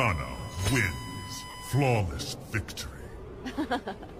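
USB whine runs from 0.0 to 2.0 s: current drawn by the USB bus in its 1 ms frames leaks into the audio through the shared power or ground, and because those frames repeat a thousand times a second, they come through as a steady, fixed-pitch tone at 1 kHz. It sits well below the main sound, roughly 15 dB down, as a thin whine beneath everything until it stops at 2.0 s. Lost LE Audio frames follow from 1.50 to 1.54 s, inside that whine. The Bluetooth LE Audio link dropped about 40 ms of data, which fits four 10 ms LC3 frames, and the decoder filled the gap by reusing the last spectrum with randomised signs. Instead of a clean gap, you hear a brief noisy smear before the real signal resumes.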